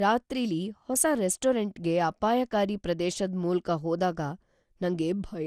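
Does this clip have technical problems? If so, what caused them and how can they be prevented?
Yes. Throughout the speech the sound is swirly, smeared and hollow, consonant attacks are blurred, and nothing is present above about 15.2 kHz. This is generation loss, most likely from repeated decoding and re-encoding, here something like seven passes through an MP2 encoder at a setting that fits 96 kbit/s. Each pass quantises on a shifted frame grid, so noise and spectral holes pile up. A single encode at that rate would sound cleaner and less washy. To prevent it, keep an uncompressed master and encode only once, at the final step.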